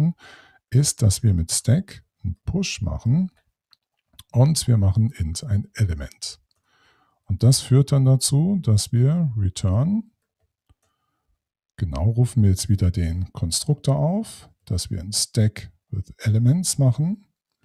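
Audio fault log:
No faults heard anywhere in this recording.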